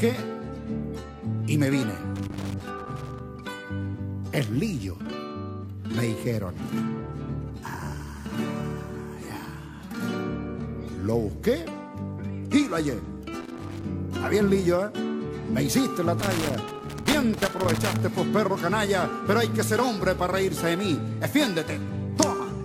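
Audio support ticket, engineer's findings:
Loose connector crackle, three irregular bursts: 2.16–3.20 s, 13.41–13.84 s, 16.20–18.00 s. Probable worn or dirty cable contact. Contact makes and breaks as it shifts, chopping the signal. Any DC on the line adds pops. Reseat or replace the connector.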